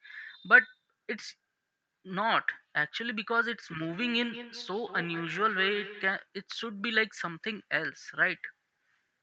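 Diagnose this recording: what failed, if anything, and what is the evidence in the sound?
A feedback echo between two devices appears in the call audio from 3.7 to 6.16 s. The speech returns roughly every fifth of a second, thinner and ringing, peaking about 14 dB below the speech. A nearby device is replaying the call into another microphone, beyond its echo canceller's reach.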